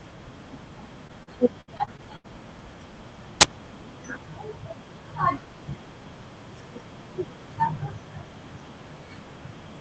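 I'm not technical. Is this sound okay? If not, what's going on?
No. There are two problems.

From 1.07 to 2.26 s you'll hear repeated packet loss, which gives a robotic sound. The speech traveled over a call connection in small pieces, and seven of those pieces went missing or arrived too late. Each time, the system filled the hole by stretching out the last bit of sound. The longest hole was about 77 ms. Roughly a fifth of that stretch is patched-over sound, so it comes out choppy and mechanical.

From 3.41 to 3.43 s there is an uninitialised buffer. Before the real audio was written in, the system played a block of memory that still held leftover data. That data was turned into sound. It lasts only 20 ms, but it comes out as a sudden, loud crack that doesn't belong to the speech at all.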